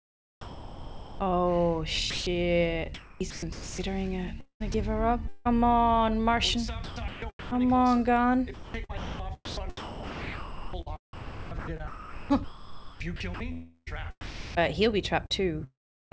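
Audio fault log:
0.41–1.19 s and 2.10–2.26 s, sound dropped by the voice detector: the sound gives way to steady comfort noise for about 0.78 s, then 0.16 s. This is likely the detector mistaking it for background.
2.94–3.78 s, 4.40–4.74 s, 5.28–14.61 s (heaviest 8.54–14.55 s, about 3.8 s replaced) and 15.26–16.12 s, sound chopped by the voice detector: sending keeps switching on and off, so the sound turns choppy, likely detector misfires. The G.722 call path's cutoff at 8 kHz shapes both.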